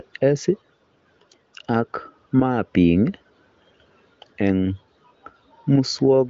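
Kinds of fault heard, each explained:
No kinds of fault are heard in this speech, which comes through the wideband phone path with its usual top end of roughly 7.6 kHz.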